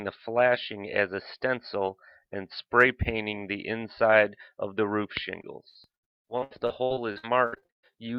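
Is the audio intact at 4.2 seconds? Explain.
Yes, the audio is intact at 4.2 seconds, with no dropout, click, distortion or other fault at that point.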